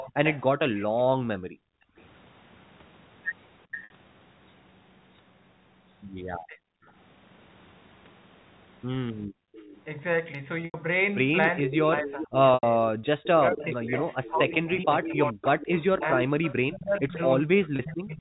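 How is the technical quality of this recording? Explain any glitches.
The recording has recurring call-path faults: returning echo, background dropouts, short concealed packet losses, and stretches where the talker's voice is pushed down.

Echo leak: a delayed copy of the voice returns from 0.00 to 2.02 s, at 6.85 to 6.91 s, from 9.53 to 9.82 s, and from 11.63 to 16.55 s. It lags by roughly 410 to 435 ms and sits about 10 to 40 dB under the direct voice. The likely cause is a far-end loudspeaker whose echo canceller let part of the pickup through. Because it is a lagging duplicate, it differs from reverberation.

Background gated by the echo canceller: the room sound drops by about 40 dB from 1.09 to 1.97 s and from 9.27 to 9.53 s, for roughly 0.7 s and 0.3 s in total. The canceller clamped the microphone while the loudspeaker played. Here the ambience vanishes, not the voice.

Packet loss with pitch repetition: at 3.84 s (60 ms), 10.65 s (90 ms), 12.54 s (90 ms) and 17.76 s (30 ms), the receiver bridged missing packets by repeating the last pitch cycle. 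The result is a brief held, buzzy tone fading out, not an abrupt gap.

Speech suppressed in double talk: the talker's voice dips about 30 dB from 6.47 to 6.62 s. From 11.61 s to the end it drops by up to about 40 dB, over roughly 4 s in total. The likely cause is both sides talking at once, so the canceller attenuated the wanted voice along with the echo it was fighting.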